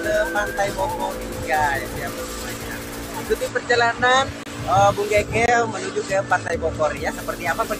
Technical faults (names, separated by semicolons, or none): gap between stream segments